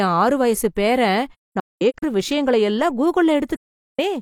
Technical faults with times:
1.34-2.04 AAC frame loss with muting
3.56-4.00 AAC frame loss with muting

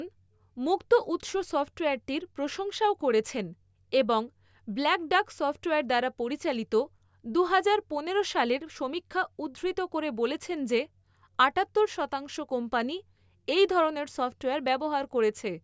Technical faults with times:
none

